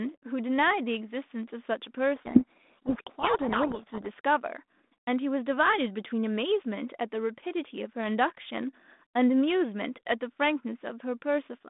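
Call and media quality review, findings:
Speech buried in harsh distortion, 2.16 to 4.07 s. Codec payload misread: G.726 code word bit order reversed, so the decoder rebuilds garbage until packing matches again. Surrounding band-limited sound fits light 32 kbit/s G.726.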